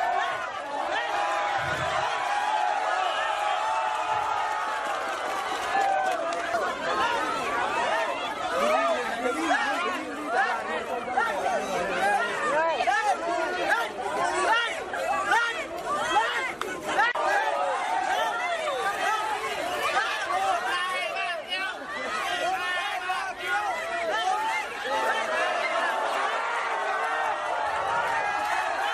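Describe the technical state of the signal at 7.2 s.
Nothing at 7.2 s points to a technical fault; the signal is intact at that moment.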